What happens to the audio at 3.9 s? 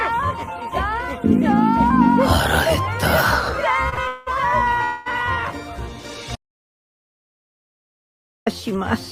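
A late packet emptied the jitter buffer twice in a row, from 3.89 to 3.94 s and 3.94 to 3.99 s, giving two short stalls from a late packet. The receiver stretched the last sound by about 27 ms, then 32 ms, and resumed without loss, so the sound briefly hangs with a faint buzz or dip.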